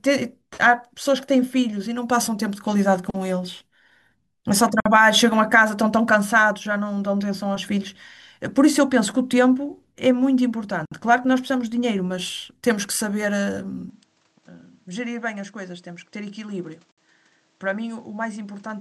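At 4.80 s the speech drops out for 54 ms, and the same hole recurs at 10.86 s and 16.92 s, each about 60 ms long. The 6-second spacing marks these as gaps at a join of encoded pieces. Each segment was encoded on its own, and the encoder's start-up delay and final-frame padding were left in place when the segments were concatenated. The result is a short silence, its edges smeared by the codec, after which the speech resumes exactly where it broke off.

From 13.90 s to the end the sound abruptly turns duller and quieter, with no silence at the transition. Nothing remains above 8.8 kHz, the level falls by around 10 dB, and a new background noise floor appears, sitting roughly 35 dB under the speech. The likely cause is an input switched to a poorer device partway through the recording, such as a second microphone or a headset in call mode, which brings its own narrower bandwidth, gain and noise.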